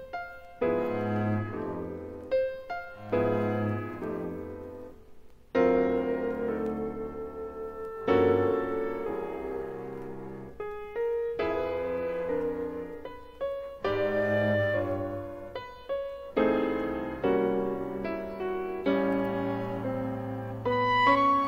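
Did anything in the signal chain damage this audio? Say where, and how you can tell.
No, nothing along the chain seems to have damaged this audio; every stage from capture through to playback sounds like it did its job without leaving a mark you can hear.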